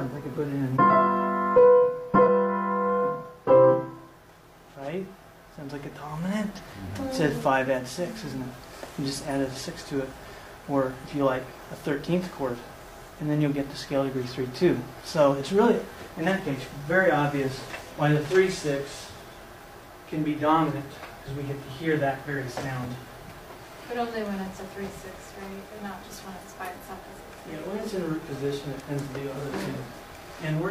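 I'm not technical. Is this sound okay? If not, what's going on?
No, there are two small glitches. At 2.23 to 2.29 s and again at 6.55 to 6.60 s you'll hear compressed frames skipped. The audio is stored in short chunks of 46.4 ms each, and a few of them went missing or couldn't be decoded. Each gap sounds like about a fifth of a second lost, which fits roughly four chunks. The playback jumps ahead at each of those points.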